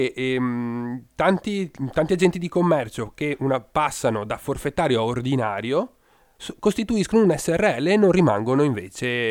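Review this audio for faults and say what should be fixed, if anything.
Nothing here needs fixing; I couldn't hear any technical fault anywhere in this speech recording.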